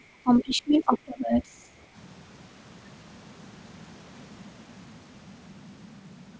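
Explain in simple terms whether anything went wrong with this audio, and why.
Speech suppressed in double talk: from 0 to 1.68 s the talker drops sharply in level, for about a second and a half in total, likely because the echo canceller muted overlapping talk. Other side's voice leaking through: a brief scrap of a second voice appears at 0.94–0.98 s, likely leftover loudspeaker sound the echo canceller failed to remove.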